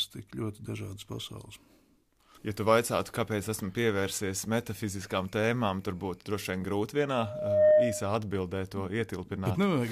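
At 7.14 s a loudspeaker feedback squeal begins: the microphone is picking up its own loudspeaker, and at 609 Hz the loop gain passes unity. The tone swells over roughly half a second to about 10 dB above the programme, then stops at 8.18 s.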